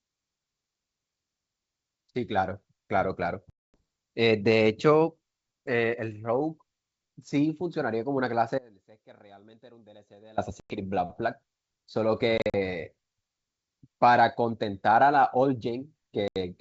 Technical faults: packet loss on an ADPCM call; audio dropout to a faint residue

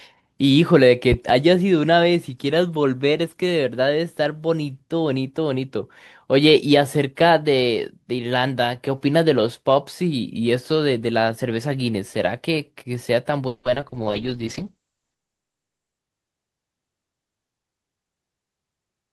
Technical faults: loud pop; repeated packet loss (robotic sound); call bitrate drop

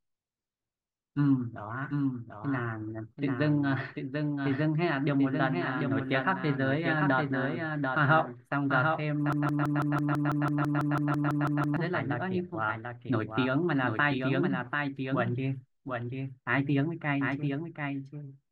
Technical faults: doubled audio track; broken-record loop

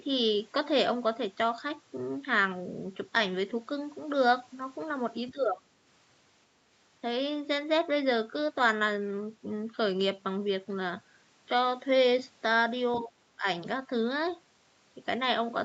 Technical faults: speech suppressed in double talk

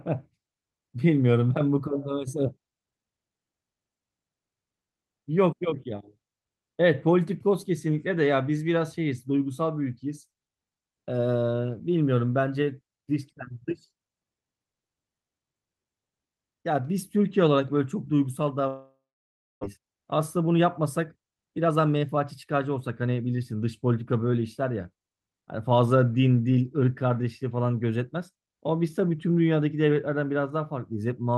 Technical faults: long network dropout; jitter buffer speed-up

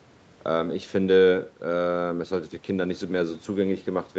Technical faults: none

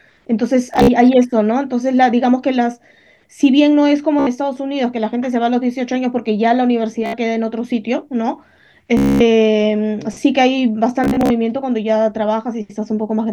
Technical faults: Bluetooth stutter

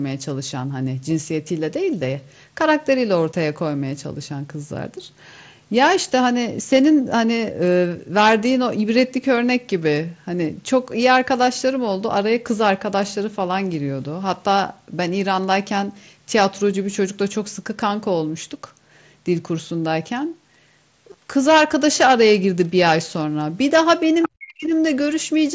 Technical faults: concealed Bluetooth headset packet loss; other side's voice leaking through; speech suppressed in double talk

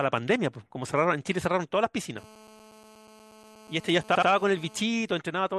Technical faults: GSM phone buzz; repeated frames

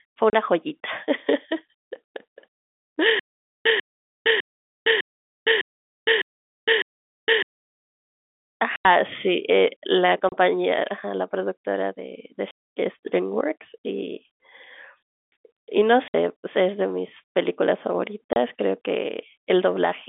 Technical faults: packet loss filled with silence; stutter with silent gaps

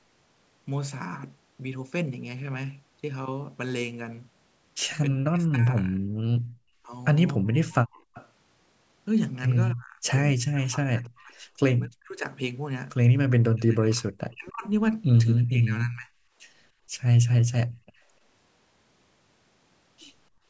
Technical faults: speech suppressed in double talk; background gated by the echo canceller; echo leak

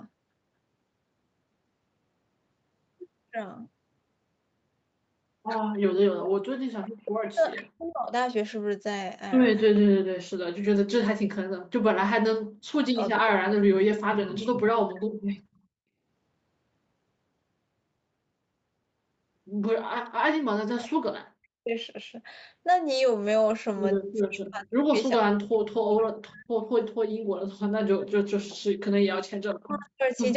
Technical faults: speech suppressed in double talk; echo leak; background gated by the echo canceller

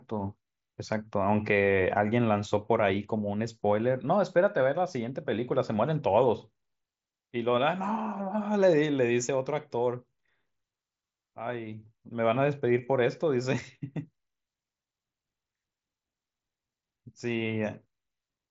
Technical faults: none

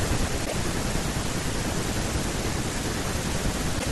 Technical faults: damaged data in a compressed stream

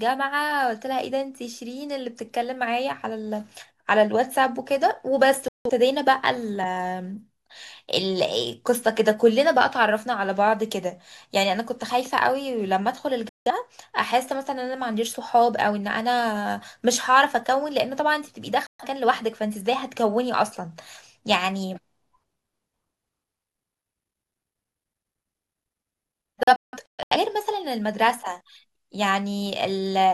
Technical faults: digital broadcast dropout

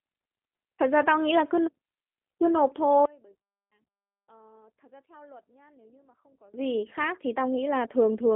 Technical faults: G.729 codec; one channel inverted

